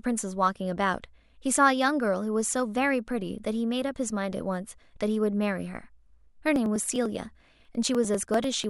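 A background task is stalling the USB bus or audio driver at a fixed interval, producing periodic USB or driver dropouts from 6.56 s to 8.64 s. Every 0.099 s, about a millisecond of audio is skipped rather than padded, so the waveform jumps ahead and leaves a small discontinuity. Roughly twenty of these land on the speech as an even train of ticks, about ten per second, audible only while signal is present.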